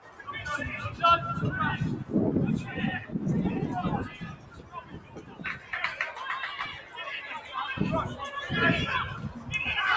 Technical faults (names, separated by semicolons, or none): noise suppressor applied to music or sounds; sound cut by the noise suppressor